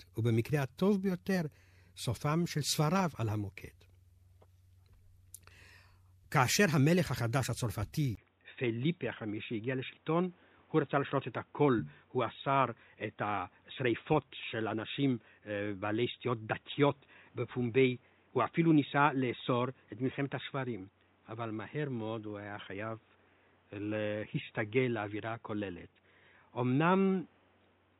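At 8.15 s, after a 20 ms silence, the speech turns dull and boxy until the end. The likely cause is an input switched to a poorer device. Nothing above 3.8 kHz comes through. A new background noise sits about 40 dB down. Loudness stays about the same.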